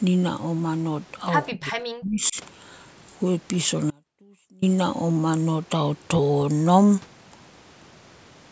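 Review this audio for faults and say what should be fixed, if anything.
Speech suppressed in double talk, 1.51 to 2.36 s: the echo canceller likely could not tell this talker apart from loudspeaker echo while the far side was also speaking, so it attenuated everything it received. The speech sinks sharply, at its deepest by roughly 40 dB, and breaks up for around 0.7 s in total within that span before recovering. To prevent it, tune the canceller's double-talk detection to keep the near-end path open when both sides talk.

Audio dropout to a faint residue, 3.91 to 4.62 s: the wanted signal was lost for 0.72 s, likely through a break upstream, while the rest of the chain kept running. The speech cuts off abruptly rather than pausing or fading, leaving only a faint trace roughly 30 dB below normal level, then returns mid-flow just as suddenly. To prevent it, find and fix the interruption in the capture or transport path so the signal stays continuous.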